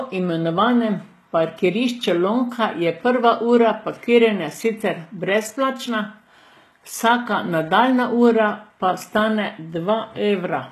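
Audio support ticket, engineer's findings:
Throughout the speech: gritty, metallic, lispy s sounds, and bright treble that doesn't line up with the lower harmonics. Nothing above 12.3 kHz. Likely HE-AAC compression, with spectral band replication copying low bands upward. Unlike plain low-bitrate dulling, the top stays bright but synthetic. The damage fits a 16 kbps stream.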